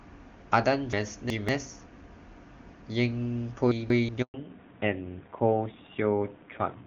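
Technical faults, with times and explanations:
0.93–1.49 s and 3.72–4.09 s, chunks out of order: Each span holds blocks of about 0.19 s that play in the wrong sequence. In the first, one block arrives two positions late; in the second, one position late. All the audio is still present, but the misplaced block breaks continuity, giving a brief jumbled stretch with hard joins.
4.22–4.34 s, handover gap: A 120 ms dropout where the sound decays within a few tens of milliseconds and then goes fully silent. This fits the call being moved between networks, with no frames delivered during the switch. Whatever was spoken in that window is gone, not delayed, and the audio resumes once the new link carries frames.
4.34–6.87 s, fallback to narrowband: Right after the gap, the bandwidth collapses and nothing above 4 kHz remains through to the end. The speech turns duller and rougher, where before 4.34 s the wideband top end up to about 7 kHz was clear. 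This points to the link dropping from AMR-WB at 23.85 kbit/s to AMR-NB at 7.4 kbit/s, which carries only telephone-band audio and codes it more coarsely.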